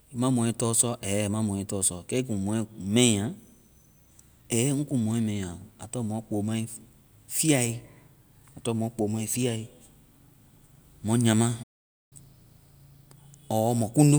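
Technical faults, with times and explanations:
11.63 to 12.13 s, playback stall: the speech cuts to silence for about 0.48 s, likely because the player ran dry of data or its thread got blocked.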